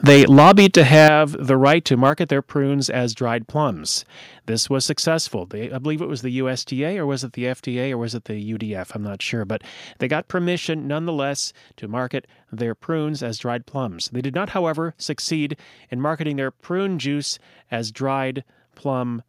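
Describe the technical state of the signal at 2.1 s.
The microphone input gain was likely set too high, so from 2.06 to 2.1 s the loudest peaks overran the converter by about 1 dB and had their tops sheared flat. This is microphone overload: a small fraction of the waveform clips, giving that syllable a brief harsh, crackling edge. At 2.1 s the call software likely reacted to that clipping with a microphone volume step down, cutting the device's input gain by about 5 dB at once. The speech and the room noise behind it both drop together, an abrupt step in level.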